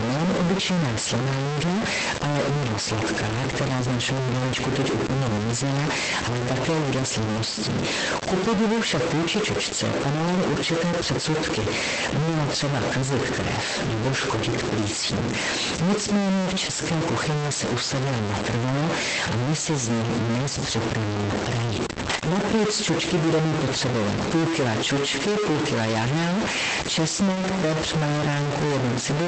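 This speech clip carries distortion throughout, with a hiss that fills the pauses; the likely cause is a stuck bit in the converter or data line. A short concealed packet loss smears the sound briefly from 16.65 to 16.69 s and again from 21.93 to 21.97 s, where about 20 ms of missing audio was filled by continuing the previous sound. Lost packets rebuilt from error correction give rougher, noisier patches from 16.67 to 16.69 s, 21.97 to 22.43 s, and 27.27 to 27.41 s. These sections were decoded from low-bitrate backup copies, and the 240 ms stretch points to about a dozen separate lost packets. The audio came through an Opus call path, which limits it to about 8 kHz.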